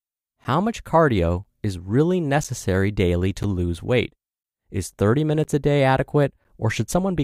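Periodic USB or driver dropouts recur about once a second from 0.44 s to roughly 6.45 s, around seven in all across the speech. Each time, something blocks the USB bus or audio driver on a fixed schedule, so roughly 10 ms of audio never arrives and is replaced by silence. The abrupt gap, and the cut at each edge, sounds like a small tick or pop landing at an even pace through the speech.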